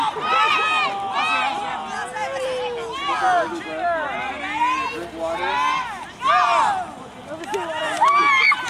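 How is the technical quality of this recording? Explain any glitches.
The recording has one glitch, clock slip clicks. From 0.26 to 8.7 s, faint regular ticks recur roughly every 0.15 s. Two unsynchronised clocks, likely around 150 ppm apart, drop or repeat single samples.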